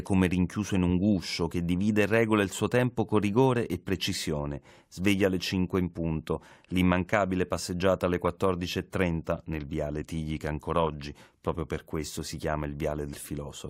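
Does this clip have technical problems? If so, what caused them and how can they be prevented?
Yes. Compressed frames skipped at 10.01 s, just after "nel viale", and at 13.13 s: the decoder dropped missing or damaged frames of about 21.3 ms, losing roughly 150 ms, then 40 ms, of speech. Preventing it means checking file integrity after transfer and re-encoding from an intact source.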